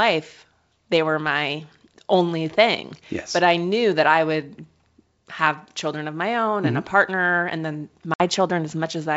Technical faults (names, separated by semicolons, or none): packet loss on an ADPCM call